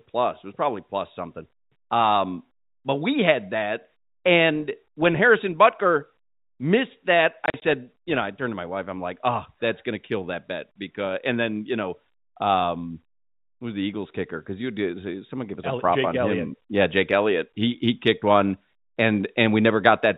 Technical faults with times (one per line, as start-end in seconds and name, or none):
7.46-7.62 packet loss filled with silence